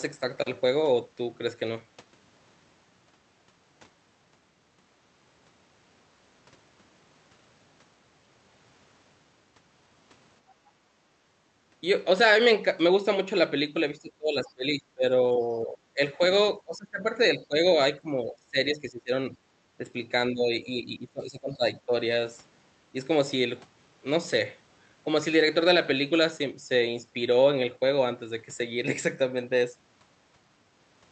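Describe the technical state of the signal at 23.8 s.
At 23.8 s the speech comes through intact, with no dropout, glitch or other fault at that moment.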